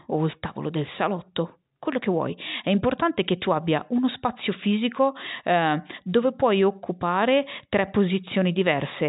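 No technical faults are audible.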